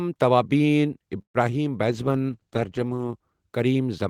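A call audio freeze runs from 1.21 to 1.52 s. The sound stalls, the last fragment is stretched into a fading buzz for roughly an eighth of a second, then about 100 ms of silence follows before the speech resumes exactly where it stopped. Nothing is lost; the stream simply arrives later afterward, shifted by about 128 ms. The likely cause is packets held up in transit, leaving the jitter buffer empty so the receiver had to fill the gap.

A call bitrate drop follows from 1.90 to 3.21 s. The speech turns rough and watery, with a duller, band-limited top end, and stays at its worst for about 1.2 s before clearing. This is the encoder being told to spend far fewer bits after the bandwidth estimate fell. The degradation points to a fall from around 40 kbps to around 14 kbps, low enough that the codec coarsens its coding and trims the high frequencies.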